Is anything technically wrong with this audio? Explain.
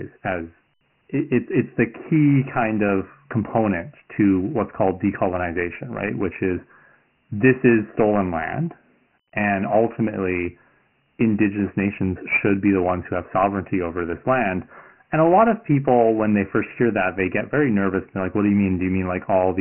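Yes. Throughout the speech there is Dialogic VOX ADPCM coding. Nothing is left above 3 kHz, which points to 4-bit ADPCM at 6,000 samples a second. The coarse adaptive step size leaves heavy damage: a gritty hiss riding on the voice, with a dull, narrow telephone band.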